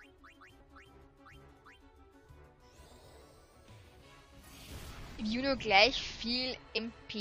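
At 2.24 s the audio stutters briefly. This is overlapping chunks. The audio was handled in pieces of about 3 s, and each piece began slightly before the previous one ended. About 7 ms of sound therefore plays twice at the join. Later, the sound jumps ahead twice, at 4.42 s and from 6.77 to 6.79 s. These are compressed frames skipped. Whole coded frames never reached playback, so roughly a tenth of a second, then about half that, is lost.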